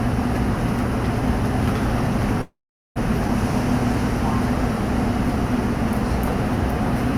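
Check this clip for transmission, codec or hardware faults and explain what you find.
Two transmission faults are audible, a call audio freeze followed shortly by a skip ahead.

From 2.41 to 2.98 s there is a call audio freeze, likely caused by packets being held up in transit so that the jitter buffer ran dry. With nothing new to play, the receiver stretched the last bit of sound into a brief fading tail, which then gives way to about 0.42 s of silence within the 0.54 s hole. When delivery resumes, the sound picks up exactly where it stopped, so nothing is lost and the audio that follows arrives about 0.54 s late.

From 3.28 to 3.30 s there is a skip ahead. A stretch of audio, roughly a fifth of a second, was dropped while later audio was already queued, either lost in transit or discarded by the jitter buffer when it overflowed. Playback jumps straight over the missing portion, with only a tiny 3 ms bridge, so the sound on either side is joined almost seamlessly but audibly lurches forward.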